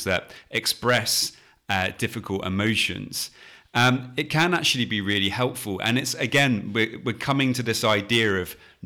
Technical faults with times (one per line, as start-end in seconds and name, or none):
0.00-8.85 hard clipping